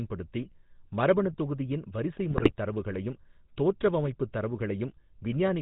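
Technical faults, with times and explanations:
throughout: GSM full-rate codec, at 13 kb/s; speech rebuilt from a vocal-tract filter and pulse excitation, nothing above 4 kHz, giving plainly audible buzzy roughness.
2.31–2.53 s: GSM bit errors, just before "தரவுகளையும் தோற்றவமைப்புத்"; corrupted filter, pitch and gain values distort frames into squawks and gargling, which fits an error rate around 3%.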